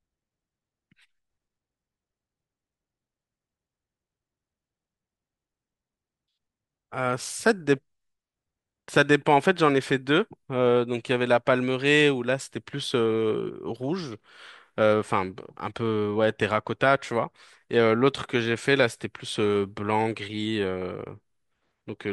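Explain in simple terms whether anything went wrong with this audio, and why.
Nothing went wrong with this speech recording; there are no glitches, dropouts or other problems anywhere in it.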